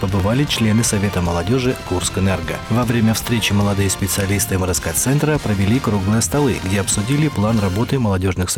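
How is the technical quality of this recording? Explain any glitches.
The recording has one recurring glitch. Clock drift buffer slips: brief clicks every 2.15 s, from 0.20 s to 6.64 s. Mismatched device clocks likely drop or repeat a small block of samples.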